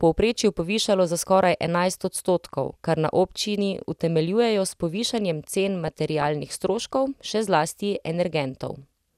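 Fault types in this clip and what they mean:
DAB burbling: burbling over the speech after "utemeljujejo s povišanjem cen", from uncorrected bit errors putting noise blips in single MP2 sub-bands.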